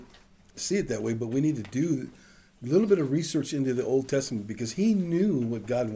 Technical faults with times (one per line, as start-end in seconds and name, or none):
none